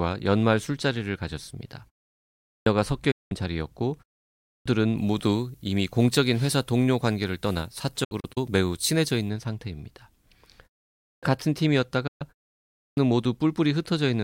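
At 2.38 s the speech comes back after a pause of about half a second with its opening missing: roughly 280 ms is swallowed and it starts abruptly out of silence. That's a clipped start after a pause. The output device dozes off during the gap and needs a moment to wake up or relock, so the first sounds never make it out. The same thing happens at 4.37 s, 10.97 s and 12.69 s, each time losing about 260 to 290 ms after a pause of 0.4 to 0.6 s.

In between, at 3.11 s, there's a digital broadcast dropout. The sound fades out over about 8 ms and goes silent for 192 ms before returning, with nothing of the missing stretch recovered. The receiver lost the signal or rejected corrupt frames and muted until clean ones arrived, and a hole that size fits six frames of about 32 ms. At 8.04 s it breaks up again, this time into several short holes scattered over about 320 ms, none longer than 64 ms. At 12.07 s there's one more gap of about 128 ms.

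From 4.97 s to 9.30 s the treble jumps up, about 10 dB stronger at 10 kHz than at 1 kHz, so the speech turns thin, bright and hissy on the sibilants. That's pre-emphasis left on, matching the FM 50 µs curve. The treble boost applied for transmission was never undone by the matching de-emphasis.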